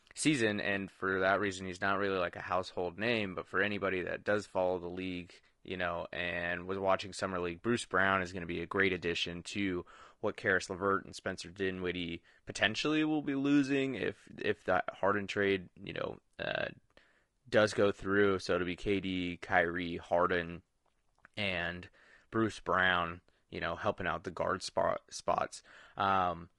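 Throughout this speech clip the voice sounds rough and grainy, with plainly audible coding damage. The likely cause is low-delay AAC compression (AAC-ELD): its short frames resolve pitch harmonics poorly and spend extra bits, and the damage fits a bitrate of about 32 kbps.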